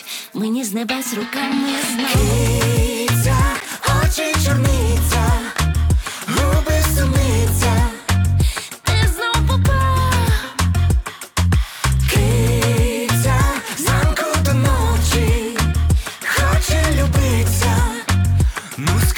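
A block of digital silence at 3.60 s: roughly 9.8 ms of audio cut out with no fade, so the hard edges produce a brief tick.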